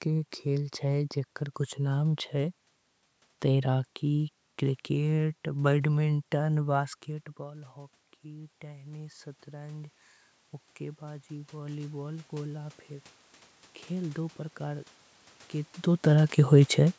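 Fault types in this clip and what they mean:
Automatic gain rising: 7.46–10.02 s and 10.78–12.86 s, gain control climbs about 5 dB each time after the input fell, swelling voice and background together.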